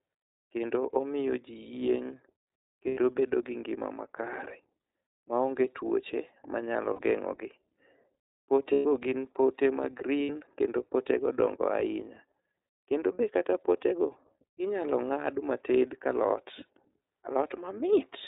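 Throughout the clip the speech carries plainly audible iLBC codec damage. Nothing above 4 kHz survives, and the voice has a slightly rough, synthetic edge from the coarse excitation coding, which fits iLBC's 13.33 kbps mode with 30 ms frames. What sets it apart from other narrowband coders is that each frame is coded on its own, so damage never carries over from one frame into the next.

That independence shapes the lost iLBC frames. At 2.87 to 2.99 s, just before "bedo gi ngima", about 90 ms drops out. Another 60 ms goes at 6.93 to 7.00 s. The longest loss, 120 ms, runs from 8.73 to 8.86 s, just before "gin pote ma". A final 60 ms is lost at 10.23 to 10.30 s, between "gin pote ma" and "kendo potego". These lengths point to runs of two to four 30 ms frames. Rather than going silent, each gap is filled by the decoder repeating the last pitch cycle blended with noise, which gives a held, faintly buzzy or breathy vowel. 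Over the 120 ms loss this fill fades as it goes on. Unlike concealment in codecs that depend on earlier frames, the voice is right again almost at once after each gap, with no smeared recovery.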